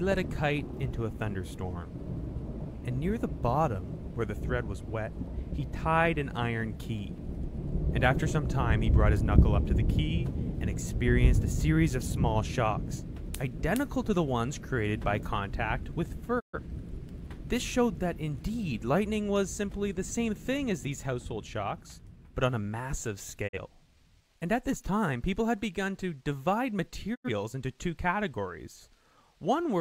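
At 16.39–16.59 s, 23.47–23.58 s and 27.14–27.29 s comes a digital broadcast dropout: the receiver mutes on corrupted frames, fading out over 20 ms into silence. The waveform shows flat gaps, and the spectrogram shows blank vertical bands, with lengths fitting one to three lost frames of about 43 ms each.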